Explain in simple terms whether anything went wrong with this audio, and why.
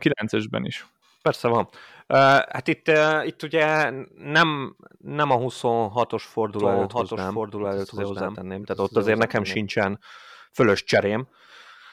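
Something did go wrong. From 6.59 to 9.55 seconds there is a doubled audio track. The speech plays twice at once. A second copy trails about one second behind the first and is a bit quieter. It has no echo tail or room sound, and it cuts in and out suddenly. This likely happened because the sound was picked up a second time through a slower route and mixed back in.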